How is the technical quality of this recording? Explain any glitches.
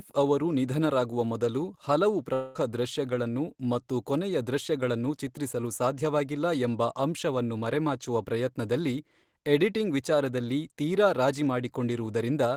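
One glitch, a likely long network dropout, mars this speech recording. From 2.33 to 2.57 s, right after "ಅವರು ನಿಧನರಾಗುವ ಮೊದಲು ಹಲವು", about 220 ms of audio never arrived. The receiver filled roughly 215 ms by extending the last sound into a fading buzz or hiss before resuming at "ದೃಶ್ಯಗಳನ್ನು ಮತ್ತು ಕೊನೆಯ ದೃಶ್ಯಗಳನ್ನು". A spectrogram shows smeared, decaying bands instead of normal speech structure.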